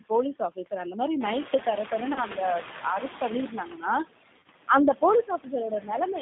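Speech comes through a narrow phone line, passing only about 150 Hz to 3.6 kHz. That band and the rough, slightly synthetic tone point to the G.729 codec at 8 kbit/s, which rebuilds the voice from a filter, a pitch predictor and a few pulses per frame. Its damage is plainly audible. Throughout, noise suppressor artifacts are present. The background is pushed down by about 18 dB, frame by frame, so the residue dips between phrases and swells under them. Around 1 s the room noise jumps by about 14 dB. From 1.2 to 3.55 s the noise suppressor is catching up. The noise first leaks through with only about 11 dB of reduction, then sinks as the estimate adapts over about 2.35 s. At 2.13 to 2.20 s, VoIP packet loss is concealed by the speech codec. About 30 ms is missing, which fits three lost frames, and the decoder stretches the last sound into a buzzy tone or coloured noise that fades. At 4.37 to 4.45 s it happens again. 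About 60 ms is lost in gaps scattered over 80 ms, the longest 30 ms. Speech is cut by the noise suppressor at 5.23 to 5.53 s, dipping by up to about 13 dB over roughly 150 ms. It happens again at 5.7 to 5.9 s, dipping up to about 10 dB over around 100 ms. Those parts sound swallowed.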